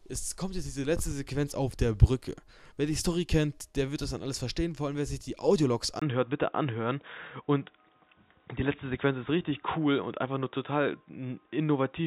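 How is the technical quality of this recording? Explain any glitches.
The first half is clean in bandwidth, but the recording degrades partway through. From 6.00 s to the end, the sound turns dull and boxy. There is a short gap of about 20 ms at that moment. After it, nothing is heard above 3.8 kHz. A faint new background noise appears, well below the signal. The level stays about the same. This is most likely an input switched to a poorer device, such as a second microphone or a headset call profile.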